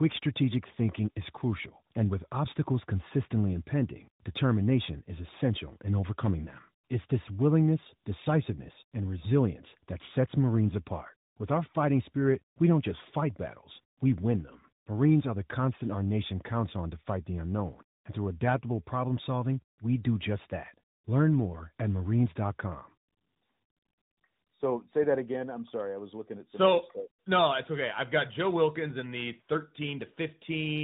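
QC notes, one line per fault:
Throughout, tandem speech coding: the speech was coded with CVSD, then again with AMR-NB, the later coder working on the earlier one's degraded output. Rough, warbly, nothing above 3.8 kHz.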